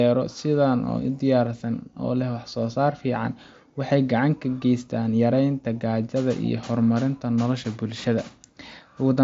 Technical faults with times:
none

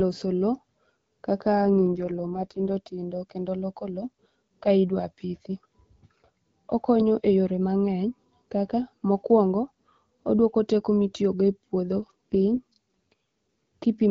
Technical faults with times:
1.62-2.70 AMR rate drop
11.95-13.13 AMR rate drop

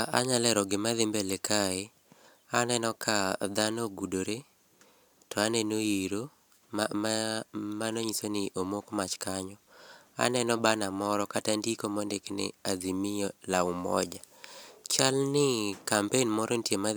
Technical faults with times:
none

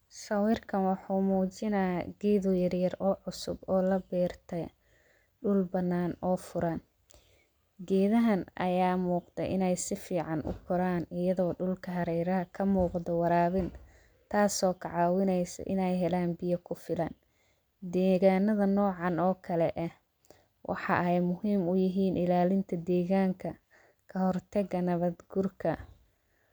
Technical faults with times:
none

